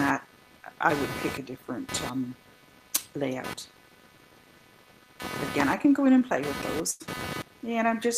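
Load changes in the computer's processor, graphics card or mouse disturb the shared ground of the audio circuit throughout, producing computer activity noise: a buzzing, scratchy chatter pulsing at around 300 times a second, roughly 15 dB below the sound, rising and falling with the machine's activity.

From 6.19 to 6.23 s, a short concealed packet loss occurs when a few hundredths of a second fail to reach the decoder in time. About 12 ms of continued sound bridges the hole before blending back, leaving a brief smear or wobble where 20 ms of real audio is gone.

From 6.91 to 7.02 s, a burst of packet loss drops several packets in a row. The receiver stretches the last sound for about 91 ms while turning it down, heard as a held buzz or fading hiss. Playback then resumes with 100 ms of audio missing.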